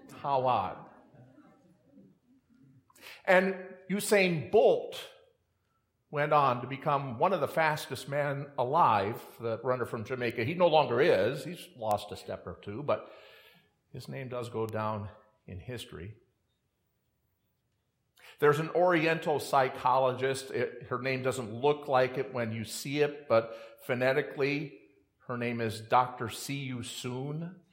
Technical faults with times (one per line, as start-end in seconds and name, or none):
10.30 bit error spike
11.91 bit error spike
14.69 bit error spike